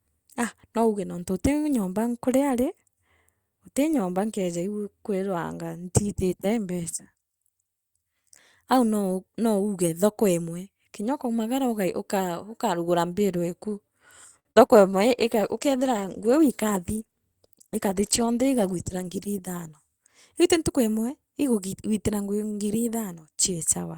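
At 14.39 s a short stall from a late packet holds the speech for about 57 ms, from 14.39 to 14.47 s. The jitter buffer emptied, so the receiver stretched the last sound until the packet arrived. Nothing is lost, but playback now runs 57 ms later.

A burst of packet loss follows at 14.51 to 14.58 s. About 48 ms of continued, fading sound stands in for 60 ms of speech that never arrived. When the real audio returns, it picks up further along, with that stretch missing.

At 14.66 to 14.71 s there is a short concealed packet loss. The decoder extrapolated about 36 ms to cover 40 ms of missing audio, then blended back in. It is heard as a brief smear rather than a clean gap.

From 14.92 s to 20.77 s a call bitrate drop leaves the speech rough and dull. The encoder cut its rate after the bandwidth estimate fell, and the loss of detail fits a drop from 64 kbps to 16 kbps. The lowest quality lasts about 4.3 s.

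Within that stretch, from 16.42 to 17.01 s, a jitter buffer speed-up plays the speech at 109% speed with no change in pitch. To shed excess buffered delay, the receiver removed short pitch-period pieces totalling roughly 70 ms, so the delivery sounds hurried.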